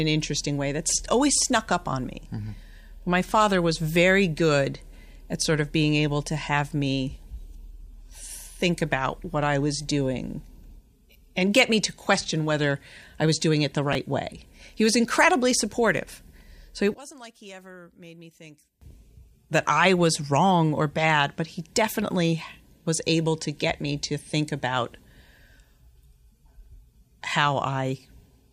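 A speech recording with two brief technical faults. Just after "was doing it the", from 13.93 to 13.95 s, there is a tiny jumbled flicker. This is chunks out of order: a 10 ms piece of audio arrives one chunk late and plays after the piece that should follow it. Nothing is missing, but the swapped order leaves hard joins. From 16.94 to 18.82 s the speech suddenly drops by about 22 dB, leaving a faint trace in place of the direct sound before returning at full strength. The likely cause is one channel inverted. With one stereo channel in reversed polarity, the centred speech shared by both channels cancels when they are mixed to mono, and only the small difference between them remains.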